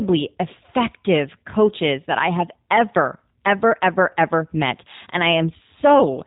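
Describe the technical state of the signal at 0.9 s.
At 0.9 s, as throughout, G.729 codec coding is plainly audible: speech rebuilt from a vocal tract filter and sparse pulses sounds rough and synthetic, band-limited below 4 kHz, consistent with 8 kbit/s.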